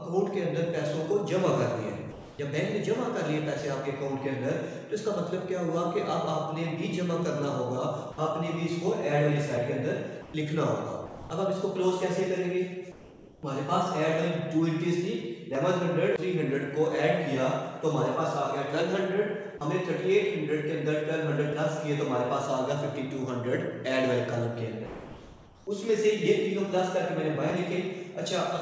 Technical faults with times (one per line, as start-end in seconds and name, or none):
2.12-2.39 comfort noise in place of the background
8.12-8.18 sound dropped by the voice detector
9.57 audio missing between chunks
10.22-10.34 sound dropped by the voice detector
11.06-11.30 sound dropped by the voice detector
12.92-13.43 comfort noise in place of the background
15.55 audio missing between chunks
21.52 audio missing between chunks
24.86-25.67 comfort noise in place of the background
27.50 audio missing between chunks